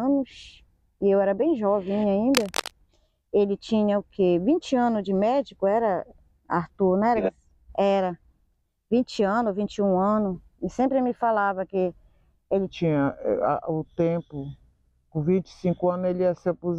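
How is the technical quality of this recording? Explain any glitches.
The recording has two technical faults: a burst of cable scratch noise near the start and a section at the wrong speed at the end.

From 2.35 to 2.71 s there is cable scratch noise, likely from a worn cable or connector being moved so its contact resistance jumps around. It sounds like harsh rustling only about 5 dB below the sound. On a spectrogram it shows as dense, ragged broadband streaks, and the waveform gets spiky, uneven bursts.

From 12.67 s to the end is a section at the wrong speed, likely from playback or editing against a mismatched clock. It runs at 0.82 times normal speed, so everything turns slower and deeper, roughly three semitones lower. A spectrogram shows harmonics stepping down and features stretched in time.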